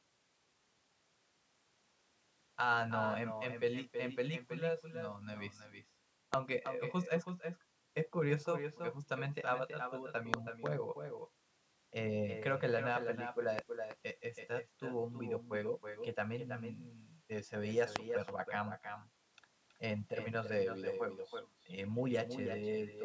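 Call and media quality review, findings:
Echo with no canceller, throughout. Speech shadowed by a thinner copy roughly 300 ms later, about 7 dB down. Far end's loudspeaker feeds its microphone. Nothing cancels it, so the talker returns after the network round trip.

Loud pops at 6.34, 10.34, 13.59 and 17.96 s. Single sharp pop each, roughly 20 to 25 dB above the speech, which continues underneath. Likely a voltage step from a plug, switch, static or driver glitch, shaped by downstream circuits.

Call microphone processing present. Nothing above 8 kHz, lowest bass trimmed by the high-pass. Normal.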